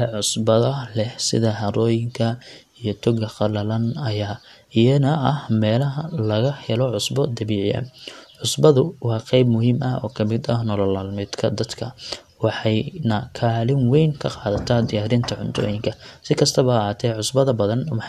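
Nothing technical stands out in this speech recording; it sounds fine all the way along.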